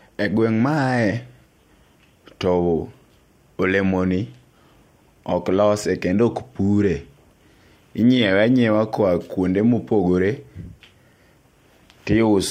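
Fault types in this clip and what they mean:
No faults can be heard anywhere in this speech recording. Nothing in the audio points to a break, a distortion or a fault along its path.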